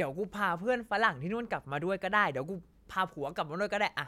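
No technical faults are audible.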